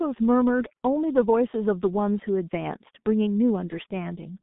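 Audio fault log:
Throughout: G.723.1 codec. The speech is boxed into a phone band of roughly 150 Hz to 3.6 kHz, with nothing above 3.7 kHz. Heavy coding damage leaves it muffled and hoarse with smeared consonants, which fits a roughly 6 kbit/s coder with long 30 ms frames.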